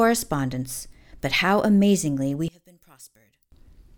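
Speech clip in which, just after "amazingly we", the sound collapses to a faint residue from 2.48 to 3.52 s, about 25 dB quieter, likely because one channel inverted cancels the centred voice in mono.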